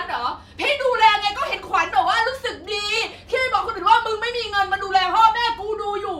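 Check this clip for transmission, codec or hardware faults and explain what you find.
One fault is present. At 3.79 s there is an overlap between stream segments. Overlapping time stamps made the player discard about 9 ms of real sound, so the speech jumps in a tiny skip.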